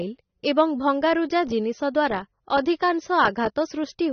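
A low-bitrate encode, likely AAC compression in its AAC-LC form, has degraded this speech recording from start to finish. The encoder has thrown away everything above about 6.3 kHz, which fits a bitrate around 24 kbps, so the speech sounds dull and muffled. The coarse quantisation also leaves plainly audible codec damage, with a smeared, warbling quality on sustained sounds and a fizzy roughness on sibilants.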